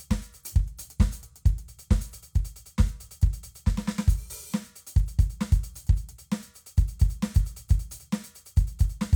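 Music clip, no technical faults detected.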